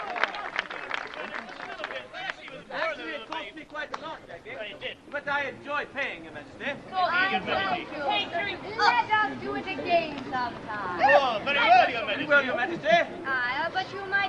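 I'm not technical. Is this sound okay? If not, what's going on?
No. From 3.62 to 6.09 s there's a call bitrate drop: the connection briefly sent far less data, so the sound turns rough and muffled before recovering.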